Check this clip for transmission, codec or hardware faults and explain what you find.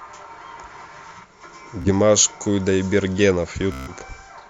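Two Bluetooth stutter events break up this speech clip, from 1.82 to 1.90 s and from 3.72 to 3.93 s. Packets arrived late or not at all, so the receiver kept replaying its last short slice of audio. The first costs about 30 ms; the second, about 150 ms, becomes a buzzy machine-gun stutter. Speech then resumes further along, with that stretch skipped. A waveform shows identical repeating blocks, and a spectrogram shows evenly spaced vertical stripes before a discontinuity.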